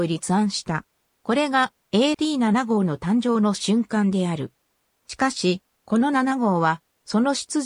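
At 2.14 s and again at 5.10 s the sound skips forward abruptly, losing a short piece, around 50 ms, with the two sides butted together. The roughly 3-second spacing points to audio missing between chunks, likely dropped at each chunk handover.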